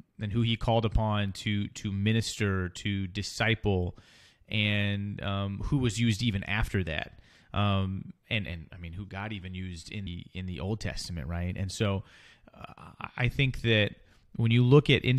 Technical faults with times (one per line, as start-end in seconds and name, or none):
10.06 compressed frames skipped